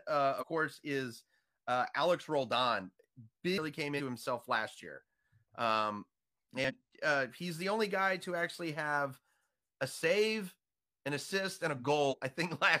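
Five brief bursts of damaged data in the compressed stream interrupt the speech at 0.38–0.44, 3.53–3.59, 3.95–4.01, 6.64–6.71 and 12.08–12.14 s. Each lasts about 60 ms. The decoder misreads corrupted frames and loses sync, producing short chirps or squawks.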